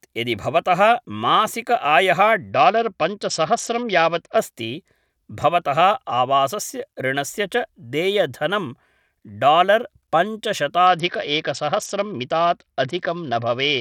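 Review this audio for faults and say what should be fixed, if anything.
Bluetooth SBC bit pool drops at 2.50–4.38 s and from 10.87 s to the end dull the treble and add gritty quantisation noise, consistent with a fall from bit pool 31 to 8 (about 66 kbps). Unlike a fixed low-pass, the sound recovers between episodes. Prevent it by reducing radio congestion or fixing the bit pool so the link cannot step down mid-recording.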